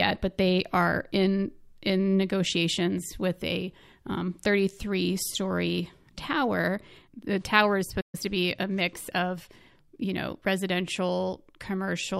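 At 8.00 s, right after "tower is", the speech halts in a playback stall. A gap of 126 ms opens, ending by 8.15 s. The player likely ran short of data or its thread was blocked. Sound then resumes with "to be a mix".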